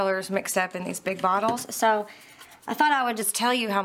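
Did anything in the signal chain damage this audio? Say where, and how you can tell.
Yes. Wrong sample rate at playback, from 1.57 to 3.22 s. The sound runs 1.09 times fast and 1.47 semitones sharp, consistent with 44.1 kHz material played at 48 kHz.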